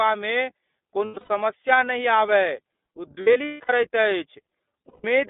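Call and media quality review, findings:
Speech band-limited to roughly 250 Hz–3.6 kHz, rough and slightly synthetic throughout; iLBC codec, narrowband, each 30 ms frame coded independently, fits the 13.33 kbps mode.

Lost iLBC frames, 1.05–1.29 s, just before "समस्या नहि आबय": buzzy held-vowel fill in bursts spread over ~240 ms, longest run about a tenth of a second. Decoder repeats last pitch cycle plus noise; recovers immediately.

Lost iLBC frames, 3.21–3.70 s: same buzzy concealment, gaps spread over nearly half a second, longest run about 150 ms, fading in the longer stretches.

Lost iLBC frames, 4.88–5.05 s: single 150 ms held, breathy fill from pitch-cycle repetition, clean recovery on the next frame.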